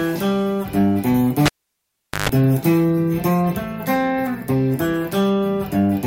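A cable pulled and plugged in at 1.46–2.29 s: pop, near silence, 50 Hz buzz, second pop; the buzz separates it from a dropout.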